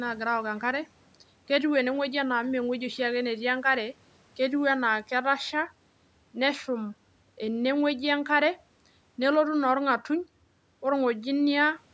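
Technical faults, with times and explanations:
No technical faults can be heard in this speech. The call's microphone processing is working normally, and nothing in the sound reaches above 8 kHz.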